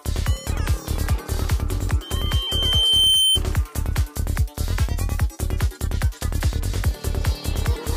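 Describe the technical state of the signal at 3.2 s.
At 3.2 s a microphone is picking up the loudspeaker it drives, and at about 3.1 kHz the loop gain has climbed above one, so that frequency keeps feeding itself. This loudspeaker feedback squeal runs from 2.02 to 3.39 s. A single piercing tone swells over roughly a second into a sustained squeal. By 3.2 s it sits a little louder than the rest of the sound, close to its peak, before cutting off at 3.39 s.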